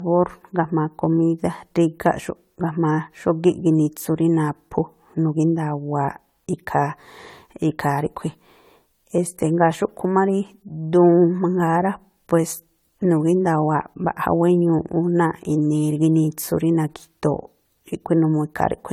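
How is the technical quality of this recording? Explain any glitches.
The quality's noticeably degraded from start to finish, and it sounds like generation loss. The speech has a swirly, hollow, smeared character, and consonant attacks are blurred rather than crisp. It's worse than a single lossy encode would give you, even though the band still runs up to about 20 kHz. The likely cause is repeated re-encoding, something like seven passes through an AAC-type codec at around 96 kbit/s. Each pass quantises on a shifted frame grid, so the noise and spectral holes pile up.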